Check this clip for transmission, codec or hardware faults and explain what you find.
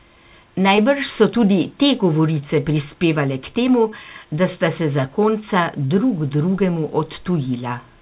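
Three short dropouts stand out, all of the same kind. They sit in narrowband call audio with nothing above 4 kHz, which fits G.711 mu-law at 64 kbps.

Short concealed packet loss occurs at 0.76–0.80 s, 3.90–3.94 s and 5.86–5.92 s. About 20 ms went missing at the first two and about 40 ms at the third. Each time, the receiver stretched the preceding sound across the gap, then blended back. Each one is heard as a brief smear or wobble, with the third the longest.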